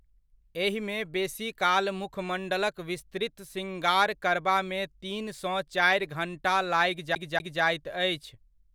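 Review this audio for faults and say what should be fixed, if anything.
CD stuck on one turn, from 7.15 to 7.62 s: a scratch knocks the laser back a track at the same point of each rotation, so the same 0.24 s slice of speech plays twice, with a brief mute at each jump. Re-rip with error-correcting extraction from a cleaned or undamaged disc.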